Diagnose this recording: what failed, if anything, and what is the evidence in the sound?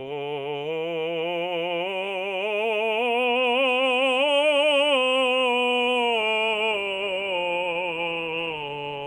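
Nothing in the chain failed: the music holds a steady, continuous signal, with no break, level jump or change in tone anywhere along the way.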